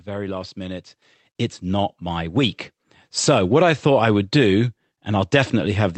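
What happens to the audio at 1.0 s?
At 1.02 s, right after "very last minute", the microphone volume is stepped up: the call software judges the input too quiet and raises the device's input gain by about 8 dB in a single jump. Voice and background noise get louder together, instantly. That sets it apart from a talker simply speaking louder, where the background would stay put, and from a smooth gain ramp, which would rise gradually.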